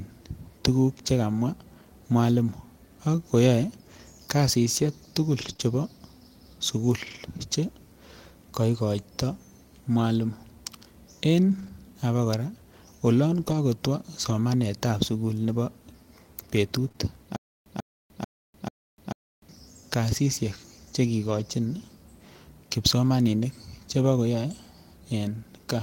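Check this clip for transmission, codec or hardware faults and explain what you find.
The speech has three kinds of fault: packets rebuilt from error correction, short concealed packet losses, and one stutter with silent gaps.

Lost packets rebuilt from error correction occur at 5.41–5.51 s, 5.61 s, 7.07–7.17 s, 11.51–11.69 s, 13.37–13.55 s, 14.29 s and 21.27–21.41 s. Each lost packet was replaced by the low-bitrate copy carried in the next packet. There are no gaps, just rougher, noisier stretches.

Short concealed packet losses occur at 5.53–5.57 s, 5.57–5.61 s, 16.89–16.98 s and 16.92–16.96 s. About 20 ms went missing each time. The decoder extended the preceding sound to fill it, which heard as brief smears or wobbles.

A stutter with silent gaps runs from 17.36 to 19.49 s. A 143 ms fragment repeats four times, each followed by about 297 ms of digital silence, every 440 ms. The likely cause is a stalled stream replaying its last buffer.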